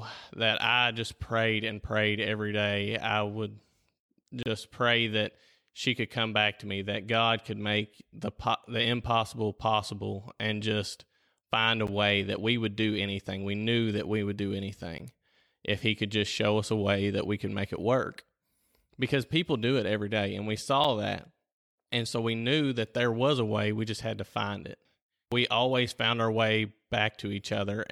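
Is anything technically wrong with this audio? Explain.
Yes. There are four blocks of digital silence, at 4.43 to 4.46 s, 11.87 s, 14.98 s and 20.84 s. The output cuts out and back without a fade. The two 12 ms gaps fit a 512-sample buffer not filled in time. The 29 ms gap sounds like a short hole, and the 6 ms one like a tick.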